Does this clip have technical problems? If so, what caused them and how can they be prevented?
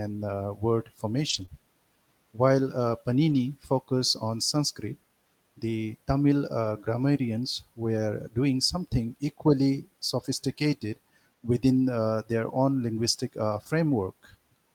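Yes. A lost packet rebuilt from error correction is heard at 1.29–1.43 s, 3.30–3.36 s and 6.64–6.66 s. At each spot the decoder played a low-bitrate backup copy carried in the next packet, so the speech continues without a gap but turns rougher and noisier for 80, 40 and 20 ms. Those lengths fit runs of four, two and one lost 20 ms packets. Prevention: reduce packet loss on the network path, for example with a wired connection or less congestion, so the backup copies are seldom needed.

A short concealed packet loss follows at 1.45–1.50 s, where about 20 ms of audio never arrived. The receiver extended the preceding sound to fill the hole, then blended back into the real audio, leaving a brief smear or wobble. Prevention: a larger jitter buffer and a steadier connection let late packets arrive in time instead of being replaced.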